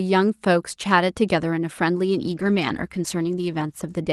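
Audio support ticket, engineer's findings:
Speech turns rough and watery from 2.24 s to 4.03 s, top end dulled. Call bitrate drop: bandwidth estimate fell, Opus encoder forced from 32 to 14 kbps, held at the lowest rate for 1.73 s. Coarser coding, high frequencies cut.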